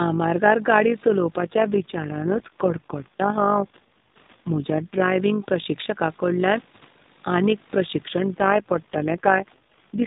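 A speech recording with a rough, buzzy tremolo running through its whole length, the level pulsing by about 6 dB at around 50 times a second. That flutter is overlap-add ripple: the audio was split into windowed frames and rejoined with overlaps that don't sum to a steady gain, so loudness swells and dips once per frame. From 1.36 to 5.09 s, and again from 8.29 s to the end just after "आनीक प्रशिक्षण", the voice turns coarser and more synthetic while the bandwidth stays unchanged and nothing drops out. That is an AMR rate drop, and the sound fits the narrowband codec falling from 12.2 to 4.75 kbps, giving fewer bits to the voice model, presumably to protect a weak radio link.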